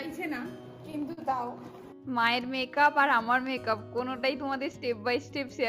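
Clock drift between sender and receiver runs through the whole clip. The sender's clock is about 4 percent slower than the receiver's, so the jitter buffer keeps draining. Unlike a single late packet, this produces small, unevenly spaced timing hiccups that recur throughout.

At 1.13 to 1.19 s, a short stall from a late packet holds the sound for 45 ms. The buffer ran empty, so the receiver stretched the last sound and then resumed exactly where it stopped, losing nothing. It is one isolated hold, not a recurring wobble.

From 2.46 to 5.41 s, repeated timing corrections repeat short pieces to keep pace with the slow sender, playing the stretch at 97 percent speed and adding about a tenth of a second overall. Every edit lengthens the sound and none shortens it, which distinguishes them from random glitches. Where they are heard at all, they come across as slight hiccups or an unsteady tempo.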